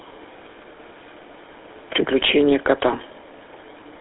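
From start to end the speech carries plainly audible GSM full-rate codec roughness, a buzzy, gravelly grain from pulse-driven vocal-tract modelling, which fits the 13 kbps coder. Nothing above 3.8 kHz.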